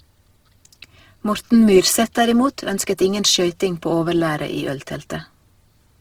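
Speech clip, likely run through Opus compression in its CELT mode at a bitrate fitting 16 kbps, so throughout the sound turns plainly grainy, rough and noisy while keeping full bandwidth.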